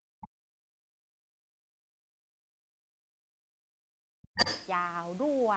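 A speech recording where the talker's level collapses from 0.0 to 1.3 s and again from 1.59 to 4.37 s, dropping by around 40 dB. The waveform thins to near silence and the spectrogram shows faded, gappy bands, likely speech suppressed in double talk by an echo canceller. The other side's voice leaking through appears as faint extra energy at 0.22 to 0.28 s, roughly 25 dB down, and then as a distinct burst at 4.35 to 4.67 s, about as loud as the talker.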